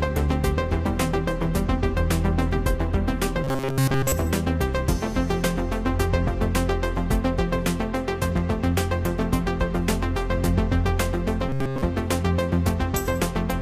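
From 3.44 to 4.12 s the audio turns into a robotic sound from repeated short buffers. A rigid, metallic buzz at 134 Hz replaces most of the sound's natural texture. It loosely tracks the original shape. This is likely a playback starved of new data, looping a slice of about 7.5 ms and skipping real audio. It returns from 11.49 to 11.82 s at the same pitch. There the repetition covers the whole stretch.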